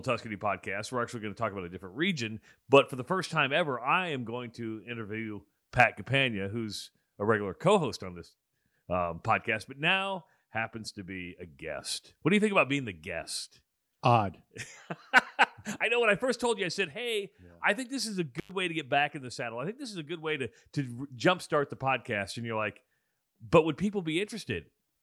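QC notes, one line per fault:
18.38–18.51 s, intermittent contact: after "think this is a" the speech drops out for about 97 ms with crackle at each edge, as a loose connection briefly opens, before "way to get back".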